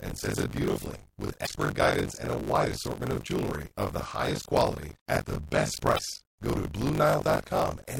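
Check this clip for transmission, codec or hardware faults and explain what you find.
Two faults are audible in this speech clip: a continuous buffer tearing buzz and two brief bursts from damaged data in a compressed stream.

Buffer tearing runs through the whole clip as a robotic 50 Hz rattle that rides on the speech and falls away in the gaps. The writer and the hardware reader of the ring buffer have slipped, so roughly a third of each 20 ms period replays audio from one lap earlier, around 40 ms old, with hard joins on either side.

Damaged data in a compressed stream shows up from 1.43 to 1.47 s and again from 5.95 to 5.99 s as short glitches. Corrupted bytes there made the decoder misread frames, lose sync and hunt for the next valid header.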